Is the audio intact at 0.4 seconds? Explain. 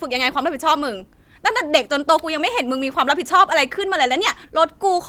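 Yes, the audio is intact at 0.4 seconds, with no fault at that moment.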